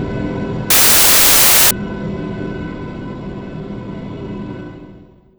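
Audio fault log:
0.70–1.71 s: samples built from the wrong bytes. For about one second the reader assembles each sample from mismatched bytes, whether shifted by one byte, swapped in order or misaligned, so the rapidly varying low-order bits land in the most significant position of every value. The result is a burst of loud, harsh broadband noise that replaces the sound for that stretch, before normal decoding resumes at 1.71 s.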